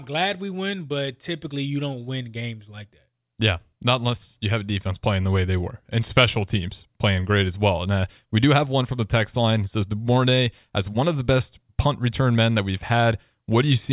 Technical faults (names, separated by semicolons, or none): none